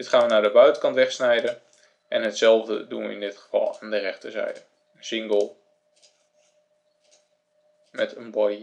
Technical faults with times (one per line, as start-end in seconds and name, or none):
none